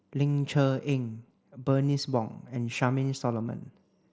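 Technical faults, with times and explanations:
Nothing technical goes wrong here: the speech comes over a Bluetooth mSBC headset link, which tops out around 8 kHz and leaves only a faint grain on the louder moments.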